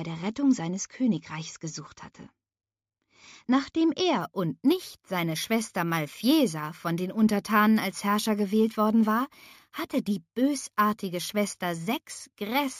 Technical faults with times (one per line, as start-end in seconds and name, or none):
4.21-12.79 imaging from sample-and-hold upsampling